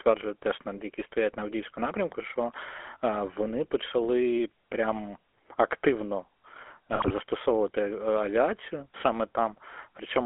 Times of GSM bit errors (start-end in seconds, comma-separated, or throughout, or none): 6.92-7.11